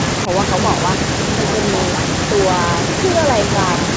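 From 0.26 to 0.32 s the speech briefly dips by about 5 dB, a short, slight sag lasting roughly 70 ms in total. This is most likely speech suppressed in double talk: with both ends talking at once, the echo canceller mistook the near talker for loudspeaker echo and turned the signal down. On the waveform the envelope pinches in for that moment; on a spectrogram the energy fades briefly across the band, which tops out near 8 kHz.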